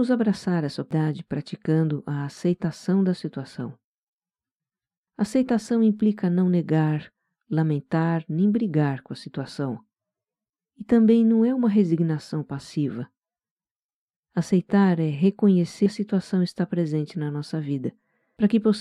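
Speech with compressed frames skipped at 0.91 s, 15.86 s and 18.37 s. The audio lurches ahead by about 0.4 s, 0.3 s and 0.4 s, which matches whole multiples of a 92.9 ms frame. Unlike a dropout, no silence is left.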